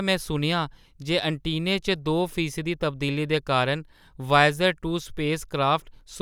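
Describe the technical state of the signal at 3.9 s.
At 3.9 s the speech signal is intact, with no dropout, distortion, glitch or other fault audible at that point.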